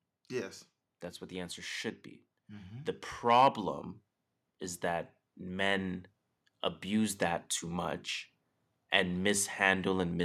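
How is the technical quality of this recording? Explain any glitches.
No glitches or technical faults can be heard anywhere.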